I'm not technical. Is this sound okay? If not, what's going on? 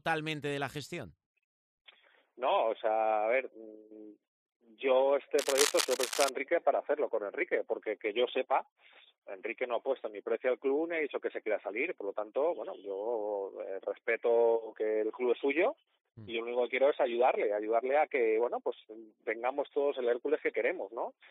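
No. Cable scratch noise runs from about 5.38 to 6.29 seconds: a burst of scratchy, rustling crackle lasting just under a second, nearly as loud as the sound it sits on. The likely cause is a worn cable, plug or knob being moved. When the metal contact inside wobbles, the electrical connection flickers between good and poor many times a second, and each flicker lands in the recording as a rough, irregular crackle.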